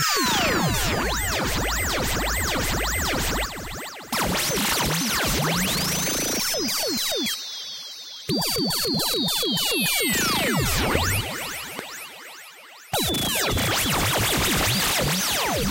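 Loud pops at 10.95–10.98 s and 11.79–11.81 s, each a single sharp burst roughly 15 dB above the sound, which continues underneath. Each is likely a sudden voltage step from a plug, switch, static or driver glitch.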